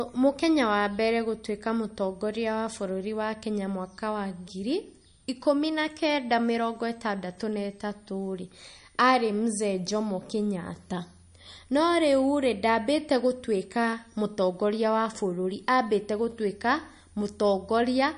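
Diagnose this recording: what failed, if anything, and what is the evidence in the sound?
A switching supply whistle sits in the analogue power or wiring stage for the whole speech clip. A faint high tone, about 40 dB below the speech, wanders between 8.16 and 10.5 kHz, mostly around 10 kHz, as the supply's burst frequency shifts. On a spectrogram it is a thin drifting horizontal line.

MP3 compression at the codec stage is the likely cause of the plainly audible watery, swirling texture throughout. Nothing exists above 10.6 kHz, a hard ceiling on the spectrogram, with weak detail below it flickering in and out as speckled gaps. This fits a starved bitrate around 39 kbps.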